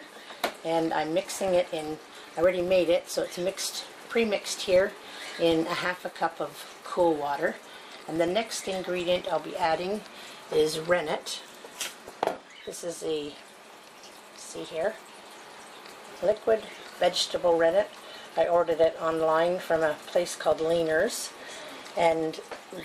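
All the way through, the audio carries a steady buzz at 25 Hz that rises and falls with the level of the sound. That's a filter restarted on every block: it drops its state and starts each 40 ms chunk from silence, so every block begins with a small tick.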